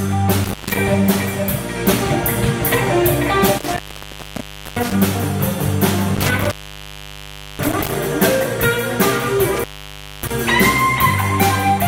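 Intermittent contact breaks the signal four times: 0.44 to 0.77 s, 3.58 to 4.95 s, 6.15 to 7.95 s, and 9.56 to 10.31 s. A loose connection opens briefly. The sound drops out for about 0.14, 0.98, 1.08 and 0.59 s, with crackle at each edge and faint hiss in the gaps.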